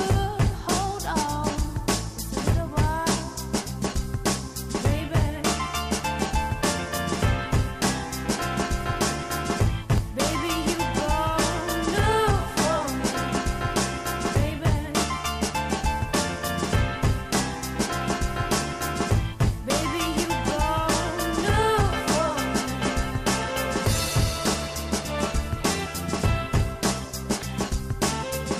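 From 2.01 s to 28.0 s there are periodic USB or driver dropouts: every 2.0 s a fraction of a millisecond goes silent, heard as a regular tick.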